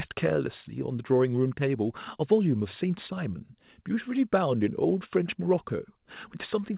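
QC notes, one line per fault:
No faults; nothing above 4 kHz, as expected.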